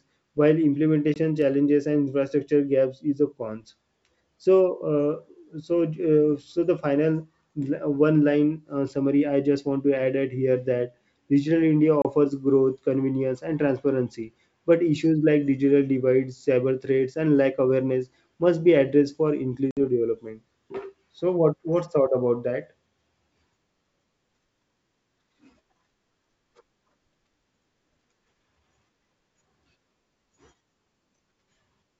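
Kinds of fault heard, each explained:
Packet loss on an ADPCM call: audio drops to silence for about 20, 30 and 60 ms, then returns briefly mismatched while the decoder's predictor and step size resynchronise with the sender's. The waveform shows flat hard-edged gaps, and the spectrogram shows blank vertical strips.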